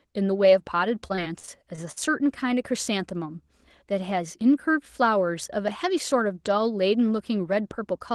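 From 1.07 to 1.98 s the speech breaks up with repeated packet loss (robotic sound): six short holes, the longest 49 ms, each patched by stretching the preceding sound. That gives a choppy texture with pieces missing. A spectrogram shows smeared, repeated frames and broken harmonics, and the waveform shows flattened, looping segments.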